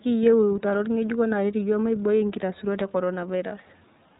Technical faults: iLBC codec

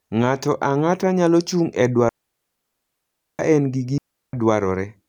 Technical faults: digital wireless dropout

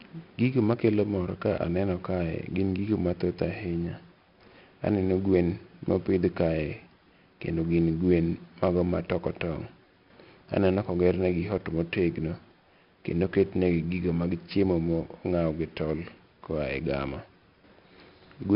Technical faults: 4-bit ADPCM compression

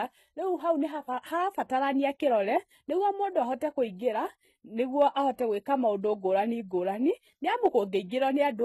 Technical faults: HE-AAC compression

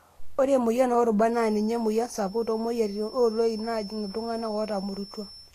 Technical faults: Vorbis compression; feedback whistle

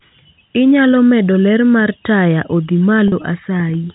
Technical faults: packet loss with pitch repetition

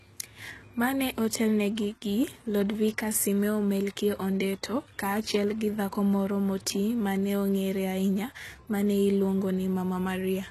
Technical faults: HE-AAC compression

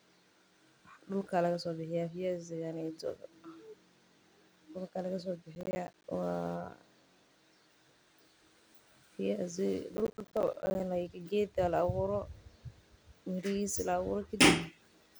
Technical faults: processor overload crackle

